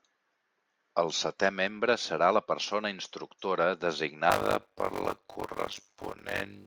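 Block size mismatch (padded) affects this speech clip from 4.29 s to the end at 6.66 s. Each block is only partly filled before being zero-padded, so a gap recurs at 100 Hz and buzzes, while the speech slows to 0.533 times normal speed with its timbre unchanged. That fits 256-sample writes into reads of about 480 samples.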